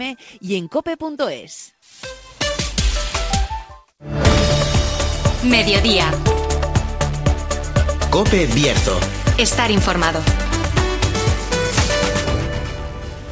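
No technical faults can be heard; the signal has the band-limited character of a wideband call path, with nothing above 8 kHz, which fits the G.722 codec.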